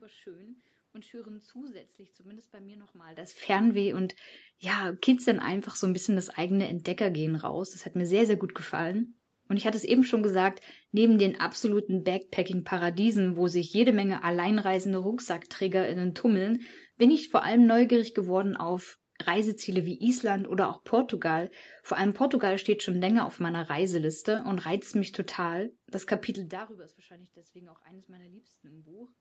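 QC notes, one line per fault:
No faults found in this speech clip.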